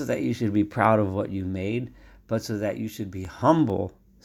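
It's a speech clip with a run of CD scratch ticks near the end. Right after "but so that you", from about 3.02 to 3.92 s, there are nine short, evenly spaced ticks at roughly nine per second, none longer than a few milliseconds. That regular spacing is the giveaway. A scratch on the disc wipes out more data than error correction can rebuild on each revolution, so the player patches or mutes those samples each time round.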